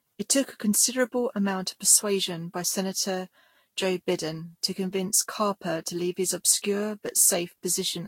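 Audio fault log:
throughout, generation loss: Speech sounds swirly, hollow and smeared, with blurred attacks and nothing above 16.6 kHz. Likely about seven lossy re-encodes, consistent with Vorbis near 65 kbit/s.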